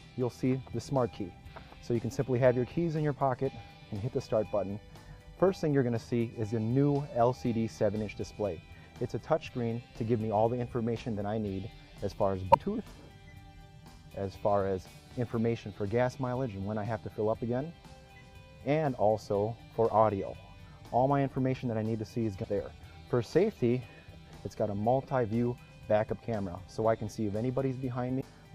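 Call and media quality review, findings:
Damaged data in a compressed stream at 12.50–12.56 s, 22.43–22.46 s and 28.17–28.23 s: three brief disruptions, roughly 30 to 55 ms each. Probable component is the decoder input. Corrupt or missing bytes make frames unreadable, so the decoder drops sync and hunts for the next valid frame header, leaving a short audible break in continuity at each point.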